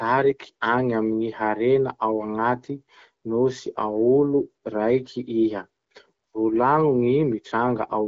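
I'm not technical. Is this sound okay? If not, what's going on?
Yes, this speech sounds fine, just like a normal HD Voice phone call, and there's nothing here to worry about.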